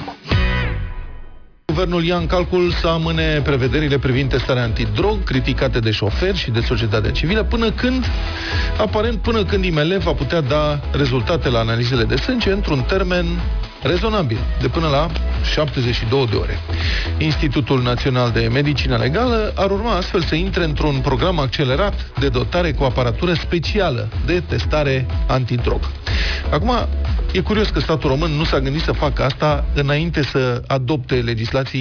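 From start to finish the sound carries aliasing. The audio points to a drop from a 44.1 kHz rate to about 11 kHz with no anti-aliasing filter first, so everything above the new limit near 5.5 kHz has folded back down into the band at wrong, unrelated frequencies. These folded components sit at about 15 dB below the signal and give high-frequency detail a gritty, metallic edge. The spectrum stays dense right up to the 5.5 kHz edge instead of rolling off.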